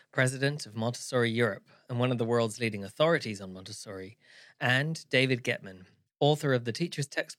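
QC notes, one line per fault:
No faults heard anywhere in the speech.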